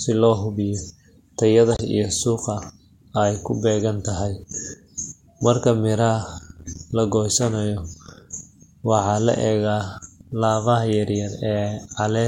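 Corrupt frames were decoded at 0.74–0.78 s (between "si loo" and "tayada iyo suuqa", peaking near about -25 dBFS), 1.72–1.82 s (just before "iyo suuqa", loudest at about -10 dBFS) and 3.76–3.81 s. Damaged compressed data was played anyway, misplacing energy across a few frames and producing brief chirps and noise bursts.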